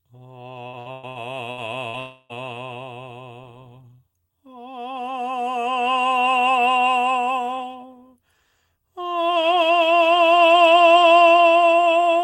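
From 0.67 to 1.97 s the music turns choppy, with a robotic, stuttering edge as pieces drop out and are papered over. This is repeated packet loss (robotic sound): audio data went missing or arrived late six times in quick succession, and each hole, the longest about 114 ms, was filled by stretching out the sound just before it. Roughly a third of this stretch is that patched-in material rather than the real music.

Right after, from 2.0 to 2.32 s, the music gives way to a smeared, buzzy continuation of the last sound, about 0.3 s of synthetic fill with no silence, before the real music resumes with that portion gone. The likely cause is a long network dropout, where no audio reached the receiver for the whole stretch and it kept extending the final sound it had until the music arrived again.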